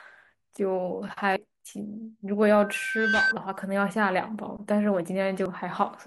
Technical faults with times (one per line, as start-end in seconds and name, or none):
0.57 block of digital silence
1.36 damaged data in a compressed stream
2.52-3.35 loudspeaker feedback squeal
5.45 damaged data in a compressed stream